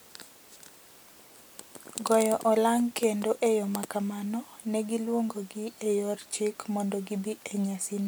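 No technical faults can be heard anywhere in the recording. Nothing in the speech suggests a problem with how it was captured, processed or delivered.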